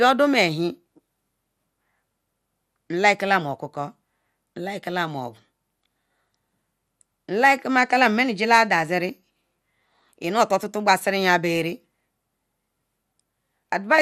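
Throughout the speech, the sound is dull and grainy, with a gurgling texture and nothing above 15 kHz. That points to MP2 compression, likely at a low rate around 80 kbps, where coarsely quantised sub-bands flicker.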